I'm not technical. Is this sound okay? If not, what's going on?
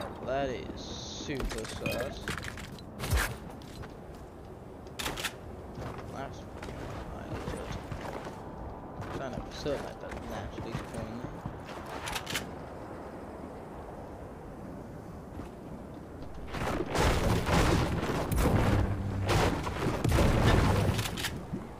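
Yes, it sounds fine.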